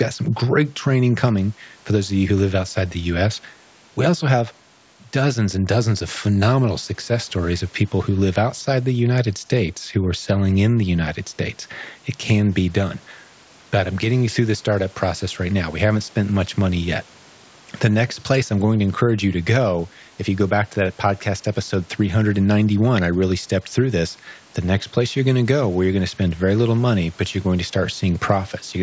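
Nothing here counts as a fault: the speech has simply been through a call's microphone processing, which trims away the lowest bass and leaves nothing above 8 kHz, and that's just how such a path normally sounds.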